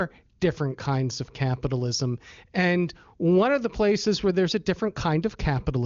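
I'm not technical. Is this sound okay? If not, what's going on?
Yes, nothing in this speech stood out as a problem on listening, and it sounds like an ordinary HD Voice phone call.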